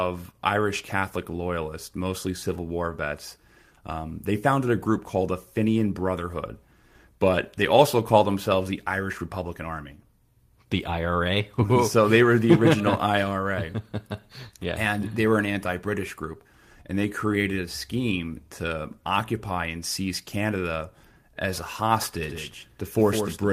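At 22.23 s the speech suddenly picks up a doubled audio track that runs to the end: a second, flat copy trailing around 150 ms behind and maybe 5 dB quieter. It's likely a slower capture path or an edit leaving two copies out of step.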